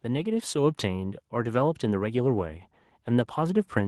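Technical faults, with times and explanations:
0.05 to 2.7 s, automatic gain rising: the automatic gain control judged the input too quiet and steadily raised its gain, by about 5 dB over these 2.6 seconds, so the speech and the background noise beneath it swell upward together rather than the talker getting louder.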